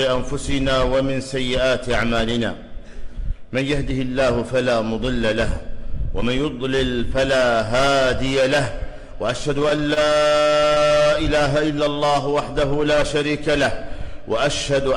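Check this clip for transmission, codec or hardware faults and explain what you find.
Two transport problems show up, both in the last two fifths of the clip, and they sit close together.

From 9.59 to 10.92 s there's a run of repeated stalls, a stutter. Packets were showing up late, so the jitter buffer kept running dry, about twenty times, with the longest hole around 27 ms. Each time the receiver just carried the last bit of sound forward until the next packet landed. Nothing actually goes missing, but roughly 265 ms of filler gets threaded in, about a fifth of that stretch, so it sounds choppy and dragging.

Right after, from 11.74 to 12.35 s, there's a jitter buffer slow-down. The buffer was low or had just raised its target delay, so the receiver bought itself some headroom by repeating single pitch periods and small slices of pause over and over. That adds about 62 ms and plays that section at roughly 91% speed. 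The pitch stays put, so you hear it as sounds getting slightly drawn out and sluggish rather than lower.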